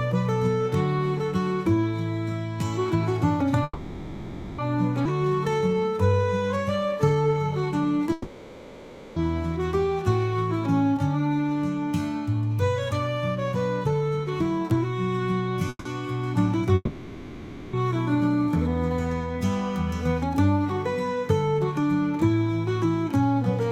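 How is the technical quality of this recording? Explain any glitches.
The recording has repeated network-related glitches: three freezes, a forward skip, a stretch of slowed playback, a long stretch of slightly sped-up playback, and one long dropout with lost audio.

Call audio freeze at 3.63 to 4.60 s, 8.12 to 9.18 s and 15.69 to 15.87 s. The last sound carries on as a fading buzz for about 0.95 s, 1.04 s and 0.16 s, likely because delayed packets left the jitter buffer empty. Unlike a dropout, playback then resumes exactly where it stopped, with nothing lost.

Skip ahead at 5.04 to 5.07 s. Roughly half a second of audio is missing, and the two sides are joined with almost no gap. This differs from a freeze or dropout because no filler sound plays. The audio simply jumps forward, as when a late backlog is discarded.

Jitter buffer slow-down from 5.12 to 8.05 s. To rebuild its reserve, the receiver repeats tiny pitch-period pieces, adding 369 ms. 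Playback runs at 88% speed with unchanged pitch, so sounds are drawn out. A tape-style slowdown would lower the pitch instead.

Jitter buffer speed-up from 11.32 to 18.84 s. Short pitch-period pieces are removed, roughly a fifth of a second in total, so playback runs at 102% speed at the same pitch. This is the reverse of the slow-down.

Long network dropout at 16.75 to 17.75 s. The last sound fades into near silence over about 0.98 s, likely because no packets arrived. The start resembles a freeze, but here that stretch of audio never plays: playback returns further on, with the gap's content gone.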